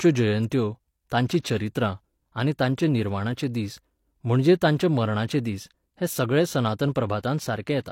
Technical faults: pre-echo

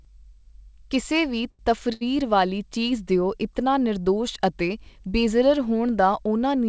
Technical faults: short stall from a late packet

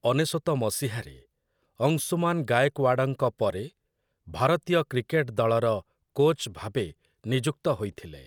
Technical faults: none

